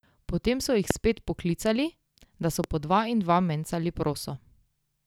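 At about 0.91 to 0.93 s there's a loud pop, a single sharp click sitting well above the speech, something like 20 dB over it, with the talking carrying straight on underneath. A second, slightly softer one lands at about 2.64 to 2.66 s. Each is a brief burst of electrical energy added to the signal, likely from a plug, switch, static discharge or driver hiccup, and the circuitry after it shapes that burst into a quick thump.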